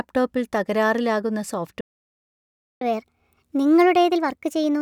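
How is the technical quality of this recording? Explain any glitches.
The technical quality is poor because of two linked glitches in this speech recording.

A playback stall begins at 1.81 s. The speech cuts off mid-flow and the output goes silent for about 1.0 s, until 2.81 s. The player had likely run out of data or had its thread blocked. Then the speech resumes.

Catch-up at higher speed follows from 2.81 s to the end. The player works through its backlog by resampling at 1.25 times normal speed to win back some of the lost time. Because the speed rises this way, the pitch rises with it, by about four semitones. The voice sounds hurried and noticeably higher.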